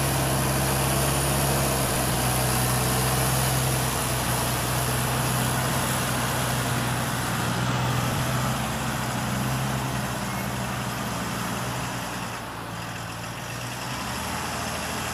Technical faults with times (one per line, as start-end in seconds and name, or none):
1.86-2.14 processor overload crackle
8.11-8.20 processor overload crackle